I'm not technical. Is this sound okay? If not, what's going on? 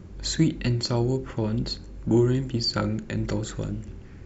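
Yes, nothing in this recording points to a technical problem with the signal itself.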